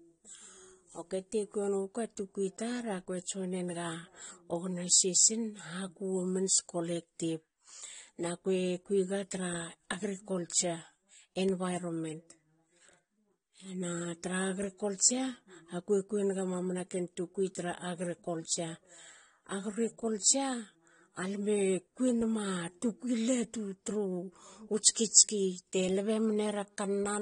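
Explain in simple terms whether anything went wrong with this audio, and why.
The speech sounds dull and smeared from start to finish, with a watery, fizzy edge on hiss sounds and nothing above about 9.7 kHz. The likely cause is AAC compression squeezed too hard, which discards high frequencies and fills gaps with approximate noise.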